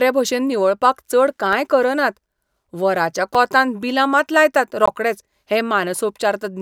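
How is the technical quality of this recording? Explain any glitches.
The speech is interrupted three times by a block of digital silence. At 1.53 s (right after "भशेन निवळपाक चड"), 3.35 s and 4.86 s, the output buffer was likely left unfilled and zeros went out in its place. The abrupt cut and return give ticks of about 2.5 ms and 3.7 ms, then a brief 19 ms hole.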